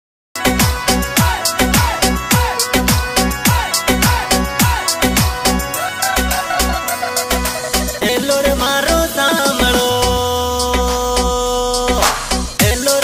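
The clip opens with a cut-off start. From 0.0 to 0.36 s there is only digital silence. At 0.36 s the sound appears abruptly, already in progress. Capture began late, so the sound's natural onset was lost. There is no attack or fade-in.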